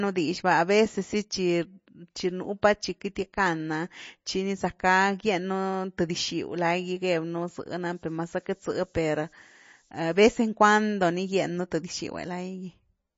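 MP3 compression, likely the cause of the watery, swirling texture throughout this speech clip, leaves nothing above 7.5 kHz. The codec damage is plainly audible, which points to a low bitrate near 32 kbps, where the encoder discards weak frequency lines frame by frame and cuts off the treble. Pre-echo sits at 3.15 s, between "pa chi" and "gackan’a chi ni zackgá". A sharp onset landed late in a transform block, so quantisation noise sized for the louder part leaked into the quiet instant before it, adding a brief hiss about 10 ms long and softening the attack. Low bit depth with noise shaping runs from 7.84 to 10.15 s and ends just before "vez en". The steady, thin hiss rises toward the top of the band, which fits roughly 9-bit resolution with the rounding error pushed upward in frequency, sitting around 20 dB below the signal.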